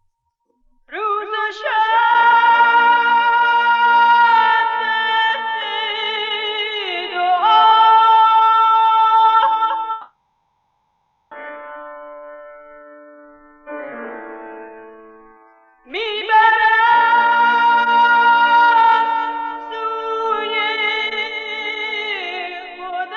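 At 9.91 s the audio stops moving forward and the last bit of sound gets smeared into a buzzy, hissy tail that fades out instead of going to true silence. That fill runs the whole way to 11.33 s, about 1.4 s, and when the audio resumes it has skipped ahead with that stretch simply gone. That's the classic shape of a long network dropout, likely a burst of lost packets with the receiver papering over the hole.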